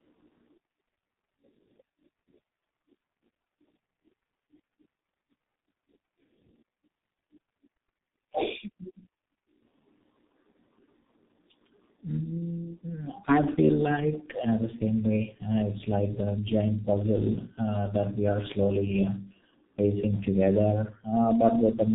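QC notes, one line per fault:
Throughout: tandem speech coding. The speech passes through two low-rate speech coders in a row, apparently an AMR-NB stage at 7.95 kbit/s and then a G.723.1 stage at 6.3 kbit/s, with a G.711 mu-law link between them that adds little of its own. The G.723.1 coder has to model speech that AMR-NB has already roughened, so the errors stack. The result is a gritty, warbling quality on top of muffling, and nothing is heard above about 3.8 kHz. A single coder at either rate would sound thin but steadier. What sets this apart from one low-bitrate codec is that compounded wobble.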